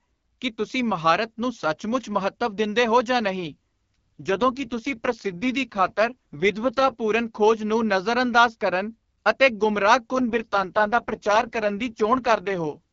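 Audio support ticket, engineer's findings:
AMR rate drop, 3.44 to 6.95 s, after "ਮਹੱਤਵ ਦਿੰਦੇ ਹੋ ਜਾਂ", recovering by "ਖੋਜ ਨੂੰ ਨਜ਼ਰਅੰਦਾਜ਼ ਕਰਨ". Speech turns rough and buzzy, consistent with the radio link forcing AMR-WB from 12.65 down to about 6.6 kbit/s. Again 10.12 to 12.78 s, same sound. Distinct from narrowband fallback or packet loss: bandwidth holds, no gaps or clicks, only coarser excitation coding until rate restores. Baseline HD Voice at 12.65 kbit/s sounds clean between drops.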